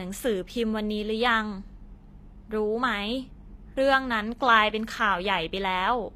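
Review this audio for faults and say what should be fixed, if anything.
Throughout, the upper spectrum seems rebuilt from copied lower bands, likely HE-AAC compression, which fits a rate near 24 kbps; s sounds come out gritty and metallic. Encoding at a higher bitrate with a full-band codec would keep the original treble intact.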